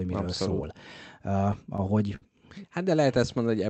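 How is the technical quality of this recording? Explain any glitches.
The recording has one clear glitch: a burst of repeated stalls (stutter) in the middle of the speech. The call codec path is audible in the top end, which stops at about 8 kHz.

From 1.53 to 2.24 s the speech catches six times. Packets arrived late, so the jitter buffer kept running dry. Each time, the receiver stretched the last sound to cover the wait. These fills add up to about 102 ms, roughly 15% of that stretch. The longest is 58 ms. Nothing is lost, but the speech drags and stutters there.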